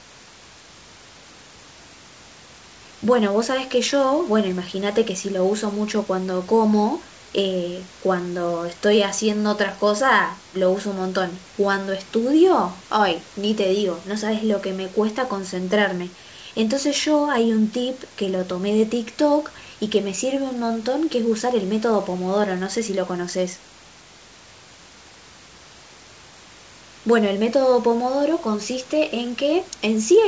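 A speech recording with nothing technically wrong to report. It has come through a WebRTC call path using a wideband codec, so there is nothing above 8 kHz, and the room noise sits about 27 dB below the speech.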